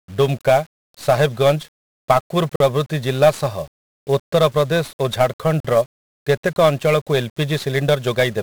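From start to finish, the speech carries 1-bit DFPWM compression. Each sample keeps a single bit, so broadband quantisation noise leaves everything fuzzy, crackly and hissy, with the treble buried.

At 2.56 to 2.60 s and again at 5.60 to 5.65 s, a gap between chunks cuts in. These are 44 ms silences, spaced 3 s apart, where the joins were left empty.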